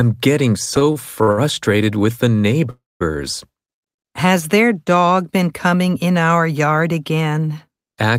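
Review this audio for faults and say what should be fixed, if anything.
Repeated stalls (stutter) run from 0.65 to 1.39 s, ending just before "with the". The speech hitches seven times. Each stall is short, the longest about 58 ms. Together they add 180 ms, about a quarter of that stretch. Packets arrived late, and the jitter buffer kept running dry. Each time, the receiver stretched the last sound to fill the wait. No speech is lost, but the flow drags. A larger adaptive jitter buffer would prevent this.

A call audio freeze follows at 2.70 to 3.02 s, right after "with the". The audio stops for 301 ms. The last sound is held briefly, then 200 ms of silence follows. The speech then resumes where it stopped, so nothing is missing. Everything after it runs about 301 ms later. The likely cause is a burst of packets held up in transit while the jitter buffer sat empty. Prioritising voice traffic on the network would prevent this.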